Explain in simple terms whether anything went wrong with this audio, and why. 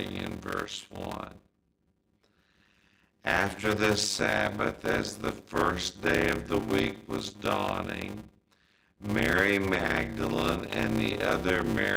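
A block size mismatch (padded) runs throughout: one stage passes on short blocks, likely about 256 samples, and zero-filled gaps make a 100 Hz buzz and slow the speech to about half speed, 0.53 times.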